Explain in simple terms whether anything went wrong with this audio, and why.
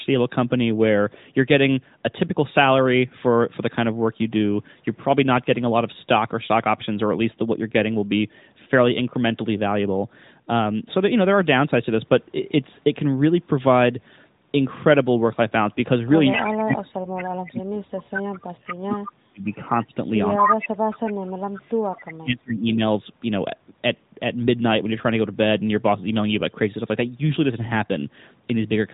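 Speech suppressed in double talk occurs from 16.57 to 22.83 s. The voice drops out deeply in pieces, about five seconds in total, likely because the echo canceller muted both overlapping talkers. Echo leak brings back a copy of the voice about 0.2 s late at 17.15, 18.71, 19.52 to 21.12 and 21.97 s. The longest stretch is as loud as the speech, and the likely cause is loudspeaker pickup the canceller missed.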